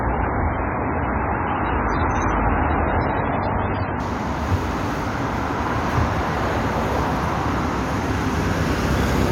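From the start until 4.0 s the sound is dull and smeared, with nothing above 6.4 kHz and a gritty, swirly edge from heavy compression. This is an adaptive stream starting at a low bitrate: the player began on a lean version, consistent with MP3 at about 16 kbit/s, then jumped, with no gap, to a richer one, consistent with about 128 kbit/s. A spectrogram shows a hard ceiling at 6.4 kHz that lifts abruptly at 4.0 s.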